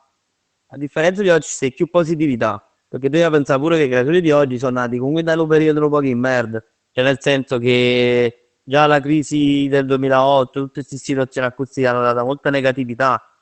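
No technical fault can be heard in the speech, which carries the narrowed, coded sound of a WebRTC call path, with content reaching up to about 8 kHz as an Opus link at around 20 kbps would allow.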